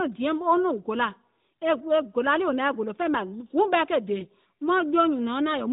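Right after "guùŋ ɓɛɛ ke dè", at about 4.20 to 4.24 s, there's a lost AMR speech frame: one 20 ms frame failed its check, so the decoder bridged it with the previous frame's pitch and vocal tract settings at lower gain. You hear a brief dip or warble in the speech before it picks up, set against the narrowband AMR sound that stops at 4 kHz.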